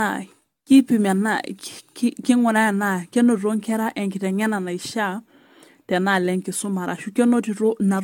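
Generation loss runs throughout, likely from roughly seven rounds of AAC-LC encoding at 96 kbit/s. Each pass re-quantises the speech, leaving it swirly, hollow, blurred at onsets, with nothing above 17 kHz.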